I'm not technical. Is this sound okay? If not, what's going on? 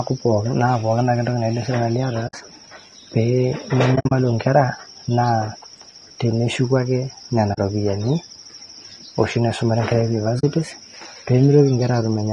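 No. The voice sounds rough and grainy all the way through, with a hissy fuzz between the tones of the voice and a thin, artificial-sounding top end. That points to low-delay AAC compression, likely AAC-ELD as used in video calls, squeezed too hard. Unlike background noise picked up by the microphone, this graininess is bound to the voice itself and comes and goes with it.

There are also four brief gaps from AAC frame loss with muting: 2.27 to 2.34 s (about 60 ms), 3.95 to 4.12 s (several short holes adding up to about 120 ms, the longest around 70 ms), 7.53 to 7.58 s, and 10.39 to 10.44 s (about 40 ms each). Pieces of the compressed stream went missing and were replaced with silence. The sound fades down and back up softly, which sets these gaps apart from a harsh cut or a stutter.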